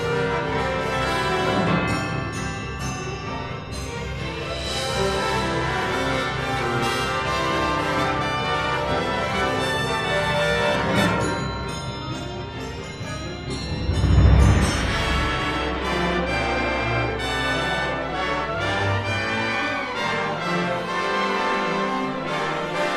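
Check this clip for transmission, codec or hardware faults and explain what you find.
No transmission, codec or hardware faults can be heard anywhere in the recording; the signal stays continuous and stable throughout.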